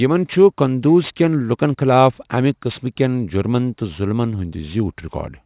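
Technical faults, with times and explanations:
Throughout, aliasing: sibilants and other bright consonants come out gritty and metallic, with harsh tones at pitches unrelated to the speech, and the spectrum stays dense right up to a hard edge at 4 kHz, which fits a drop to an 8 kHz sample rate. Energy that lay above 4 kHz was not filtered away before the rate was lowered, so it folded back below that edge as false tones, sitting roughly 25 dB under the speech.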